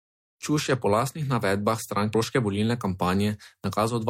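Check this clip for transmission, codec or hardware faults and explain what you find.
There's a CD skip at 2.14 s: a brief mute of about 5 ms, heard as a tick, as the laser jumps to another turn of the disc and the speech resumes elsewhere.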